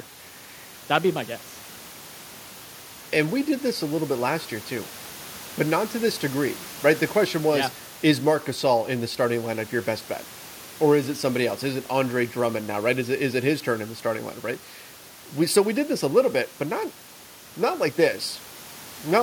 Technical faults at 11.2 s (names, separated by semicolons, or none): none